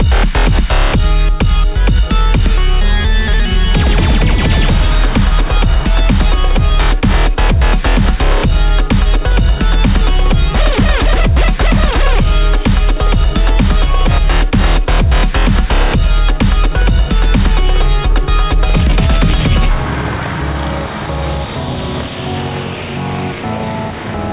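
There are no technical faults to describe in time order, and the call path carries the audio as expected, with nothing above 4 kHz.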